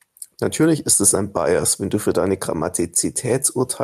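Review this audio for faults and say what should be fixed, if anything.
Gain pumping runs through the whole recording: the gain swings by around 5 dB, pulled down whenever the speech gets loud, so the level breathes in step with the talker. The likely cause is input gain set far too high with a fast limiter or compressor clamping every peak. On a waveform the peaks look flattened and loud and soft parts sit closer in level. Lower the preamp gain and slow or relax the limiter so it stops riding every loud sound.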